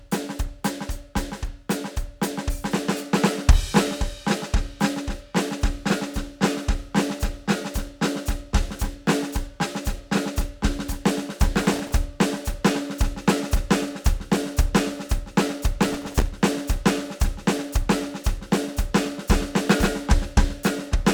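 Music with processor overload crackle at 11.58–11.94 s and 15.83–16.27 s. Dozens of tiny, roughly millisecond-long buffers arrive late and repeat stale audio, showing as dense broadband vertical streaks.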